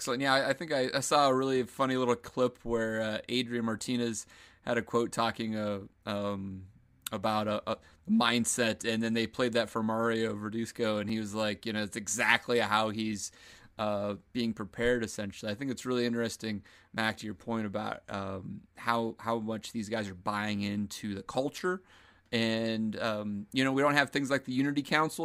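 At 11.09 s, just before "he was like you", the speech drops out for about 2.9 ms in a block of digital silence. The signal jumps straight to zero and back without any fade, a gap that fits a 128-sample block, so it sounds like a single sharp tick.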